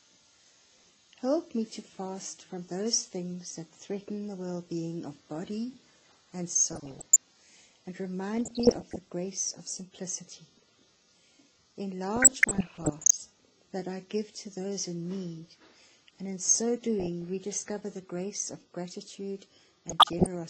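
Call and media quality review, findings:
Dull, smeared top end with a gurgly, grainy texture the whole way through. Likely MP2 compression at a low rate, somewhere around 80 kbps. Upper sub-bands starved of bits drop out and flicker, and what's left is coarsely quantised.

DAB burbling, burbling noise blips over the audio at 6.70–7.19 s, 8.38–8.96 s, 12.16–13.14 s (longest, about a second), 17.00–17.28 s and 19.89–20.26 s. Weak reception letting a small fraction of bit errors through; corrupted samples put short noise blips in single sub-bands, and corrupted scale factors make sub-bands jump in level for up to a frame.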